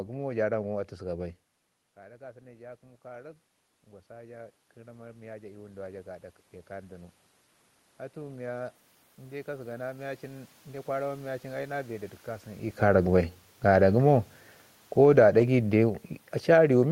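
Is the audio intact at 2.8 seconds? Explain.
No. At 2.8 s the automatic gain is rising, from 1.15 s to 11.29 s, after the input dropped by about 19 dB. Voice and room noise swell together by about 15 dB, seen as a slowly widening waveform envelope and a brightening spectrogram.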